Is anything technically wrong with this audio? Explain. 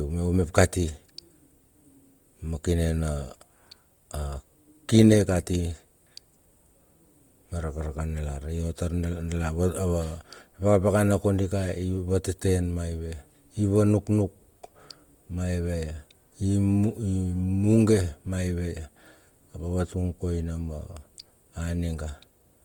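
Yes. Throughout the speech, Opus compression is plainly audible, likely from the codec's CELT music mode at a rate that fits about 24 kbps. Bands short of bits are refilled with folded or noise content, so voiced tones turn rough and grainy. A spectrogram stays full-bandwidth up to 20.1 kHz, but the harmonics smear into speckled noise rather than leaving holes.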